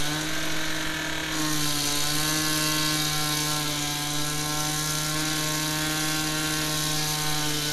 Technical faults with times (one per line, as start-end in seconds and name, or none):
none